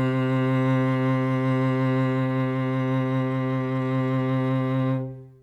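Sample clock jitter runs through the whole music clip: an unsteady converter clock, wandering by around a microsecond, mistimes samples, adding faint hiss about 50 dB below the signal that swells on loud, bright passages. A spectrogram shows a raised noise floor tracking the high-frequency content.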